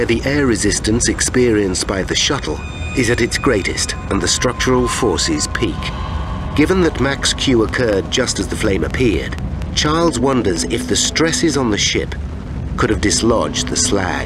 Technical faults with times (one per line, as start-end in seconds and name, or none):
7.69-11.55 train of clicks